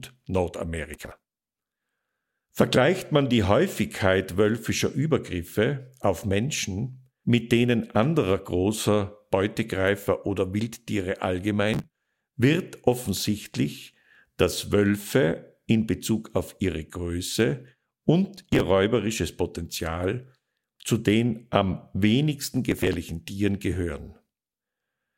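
Processor overload crackle appears four times in this speech: 0.94 to 1.82 s, 11.74 to 12.10 s just before "wird offensichtlich dass", 18.37 to 18.61 s, and 22.72 to 22.93 s right after "zu den am wenigsten". In each burst the processor repeatedly fails to deliver audio buffers on time, and the missed blocks are dropped rather than repeated. The result is a dense run of hard-edged micro-gaps heard as gritty tearing. The spacing of the gaps fits buffers of around 10 ms.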